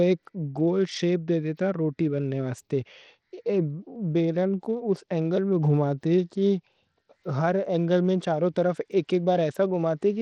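Bluetooth SBC compression runs throughout the speech: gritty, flickering treble and nothing above 18.5 kHz, likely from a starved bit pool coarsely quantising the sub-bands.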